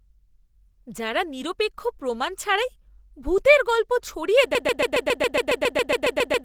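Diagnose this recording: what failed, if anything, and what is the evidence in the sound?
Codec stage first. The whole speech clip has a muffled, hoarse, grainy quality, with rough texture where the tone should be smooth, and it never lets up. That's the signature of Opus compression dropped into its hybrid speech mode, likely from being squeezed hard, and the damage level fits a low bitrate somewhere around 16 kbps. The encoder keeps band energy but can't spend bits on detail, so the timbre goes noisy.

Then at 4.55 s it turns into a broken-record loop: a fragment about 138 ms long repeats exactly, back to back, more than a dozen times, right through to the end of the clip. Something in the playback or streaming path stalled and kept resending the last chunk in its buffer, likely a stuck stream or player. Whatever should have played after 4.55 s is simply gone.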